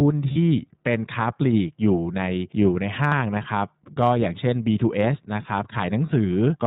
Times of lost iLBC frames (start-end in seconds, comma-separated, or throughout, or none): 0.32-0.38, 3.08-3.12, 6.06-6.09